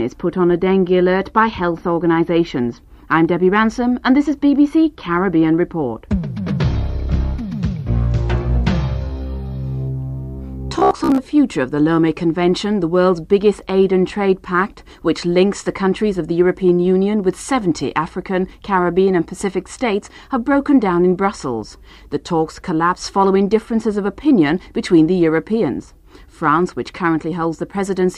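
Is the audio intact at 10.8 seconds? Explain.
No. Robotic sound from repeated short buffers runs from 10.79 to 11.22 s. Audio likely arrived too slowly, so roughly half of this stretch is a 15 ms slice replayed over and over, imposing a rigid, metallic 66.7 Hz buzz on the sound.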